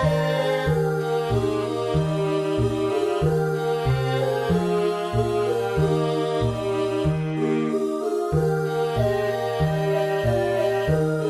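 No technical fault can be heard anywhere in this audio. Nothing in it calls for a time or a cause to be pinned down.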